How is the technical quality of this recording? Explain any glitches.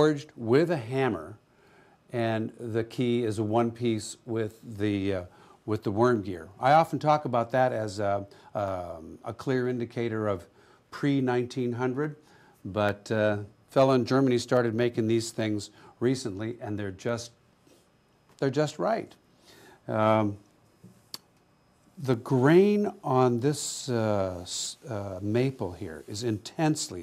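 The recording has one recurring fault, clock drift buffer slips. Two devices likely ran on separate clocks differing by around 200 ppm, so the buffer between them drifted until a few samples were dropped or repeated. From 0.28 s to 26.34 s, this gives a regular click about every 0.84 s, around thirty in all.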